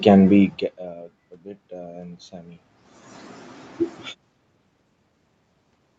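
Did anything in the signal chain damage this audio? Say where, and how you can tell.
Yes. Automatic gain rising in the call processing: from 1.68 to 2.66 s, voice and room noise swell together by about 4 dB, a slow ramp unlike a talker's own level change.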